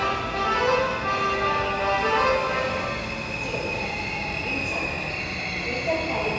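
No technical faults can be heard anywhere in this recording of sounds. There is nothing in it to mark at any point in time.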